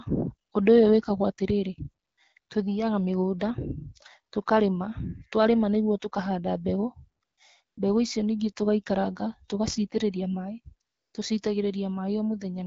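AMR comfort noise fills six pauses: 0.49, 2.05–2.17, 2.39–2.49, 7.23–7.37, 7.63–7.77 and 10.87–11.13 s. With speech frames halted, the receiver substitutes smooth synthetic hiss for the real background. A spectrogram shows flat, even noise blocks with abrupt edges, and the waveform steps to a steady floor.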